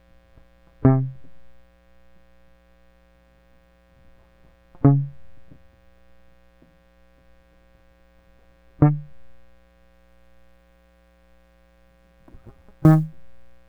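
From 9.94 s to the end of the music, sample clock jitter sets in: the converter's clock wanders by around ten microseconds, so samples land early or late and steep waveform edges pick up error. It sounds like a fine hiss or grain, roughly 35 dB below the music, following loud and bright passages.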